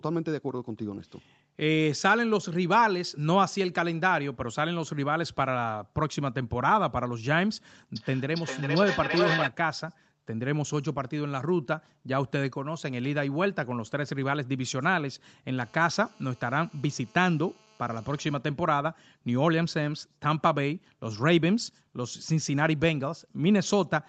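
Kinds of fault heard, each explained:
Feedback echo between two devices: the speech returns roughly every 400 ms, thinner and ringing, peaking at about -2 dB, as one device's microphone recaptures another's playback.
GSM phone buzz: a steady, raspy 217 Hz buzz with many harmonics, about 32 dB below the speech, from a nearby phone on a call being rectified.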